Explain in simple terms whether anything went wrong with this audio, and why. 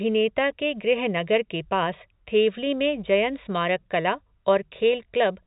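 Nothing stood out when listening: the speech has the narrow, phone-line sound of ordinary telephone coding, which is simply how that format carries sound.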